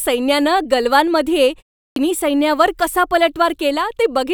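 At 1.84 s, after a 0.3 s pause, the speech restarts abruptly out of silence, its opening sounds missing until 1.96 s, about 120 ms lost. This is a clipped start after a pause: the output device slept during the silence and needed time to wake.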